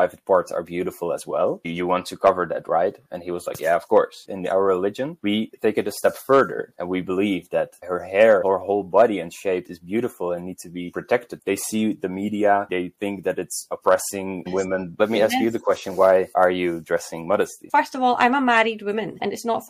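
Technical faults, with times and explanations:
1.22 to 2.86 s, crude rate conversion: a faint gritty fizz, roughly 40 dB below the sound, tracks the louder and brighter moments, which fits an unfiltered linear-interpolation step from 32 kHz to 48 kHz. Its inharmonic tones, fixed by that rate ratio, set it apart from clipping or codec swirl.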